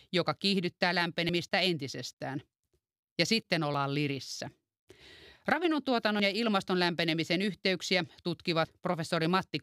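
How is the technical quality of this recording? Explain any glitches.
The speech has three brief dropouts, evenly spaced, at 1.29 s, 3.74 s and 6.20 s. Each is a jump where roughly 50 ms of audio is missing and the sound on either side is butted together with no gap of silence. The regular spacing of about 2.5 s points to audio missing between chunks. The likely cause is a recorder or processor handling the signal in 2.5 s blocks and dropping a sliver each time it closes one block and opens the next.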